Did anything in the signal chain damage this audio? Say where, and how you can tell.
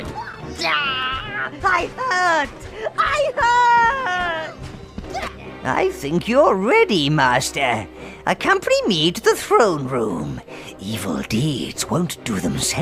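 No, nothing in the signal chain has left an audible mark on this audio, from capture through to playback.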